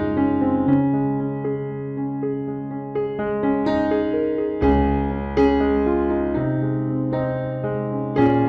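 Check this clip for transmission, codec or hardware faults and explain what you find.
Hard clipping appears at four points in the clip. The first is a brief tick at 0.73 s. Longer spells follow at 4.64 to 4.75 s, 5.39 to 5.48 s and 8.19 to 8.35 s. The overload is slight, about 2, 1, 2 and 3 dB. At those moments the peaks exceed what the signal path can carry, so their tops are sheared flat. The flattening adds high harmonics, heard as a short crackly edge on the loudest moments. The overload is greatest in the final spell.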